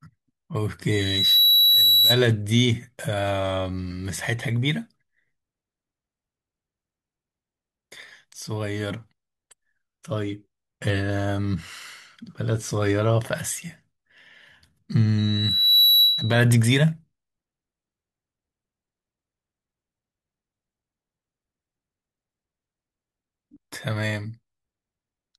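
A piercing tone at 3.9 kHz swells up over the speech twice, from 0.91 to 2.23 s and again from 15.18 to 16.40 s, building over roughly half a second the first time and 0.7 s the second, and peaking about 10 dB above the talker. This is loudspeaker feedback squeal: the microphone was picking up the loudspeaker it fed, and at 3.9 kHz the loop's gain exceeded one, so that frequency kept reinforcing itself until the amplifier limited it or the loop was broken.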